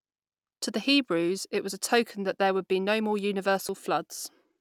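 A short speech recording with one skip at 3.69 s, right after "would be no more", where a sliver of about 20 ms vanishes and the two sides butt together. It's likely audio missing between chunks, with the recorder dropping samples at a 2-second chunk boundary.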